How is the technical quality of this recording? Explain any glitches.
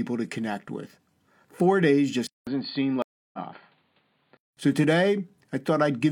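The recording has two overlapping problems in its middle section.

From 2.27 to 4.57 s the speech turns dull and somewhat quieter, with nothing above 4.7 kHz, a short gap at 2.27 s and a new noise floor about 40 dB down. The likely cause is an input switched to a poorer device.

From 3.02 to 3.39 s there is a stream reconnect. The sound drops out for about 0.31 s and resumes roughly 0.3 s further on, so that stretch of speech is skipped.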